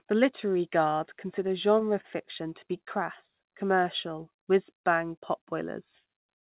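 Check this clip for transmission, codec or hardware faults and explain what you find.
Two jitter-related faults are audible in this speech, both carried over a narrowband call path whose cut-off at 4 kHz fits G.711 mu-law at 64 kbps.

Repeated stalls (stutter), 1.34 to 2.06 s, between "literary guard" and "to be": packets arrived late, draining the jitter buffer four times. The receiver held the last sound through each gap, about 56 ms in total, the longest 28 ms, so nothing is lost but the phrase stutters.

Jitter buffer slow-down, 3.24 to 3.85 s, just after "to be": with the buffer running low, the receiver repeated single pitch periods to rebuild its reserve, adding 52 ms. The passage plays at 92% speed with unchanged pitch, sounding slightly drawn out.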